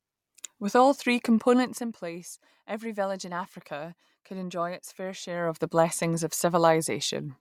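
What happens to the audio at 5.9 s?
At 5.9 s the speech carries on intact, with no dropout, glitch or distortion.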